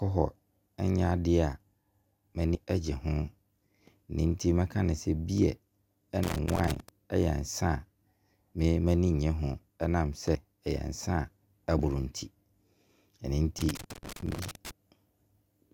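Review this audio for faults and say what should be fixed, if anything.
Two problems in this speech clip are worth fixing: skipped compressed frames and loose connector crackle.

The compressed frames skipped show up at 2.55, 10.35, 11.79 and 13.80 s. At each one the speech jumps forward: roughly 100 ms at 2.55 and 13.80 s, and about 50 ms at 10.35 and 11.79 s. Those jumps fit whole frames of around 24 ms going missing, either lost from the file or rejected by the decoder as corrupt. To stop this, check the file's integrity after encoding and transfer, and re-encode from the source if any frames are corrupt.

The loose connector crackle runs from 6.23 to 6.89 s and again from 13.59 to 14.71 s, and that second burst is where the 13.80 s skip lands. It's an uneven, scratchy crackle, which is what you get when a worn or dirty contact keeps making and breaking as the cable moves. That chops the signal and throws pops in wherever there's DC on the line. 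To prevent it, clean or replace the suspect cable and connector and make sure the run is secured so it can't shift during recording.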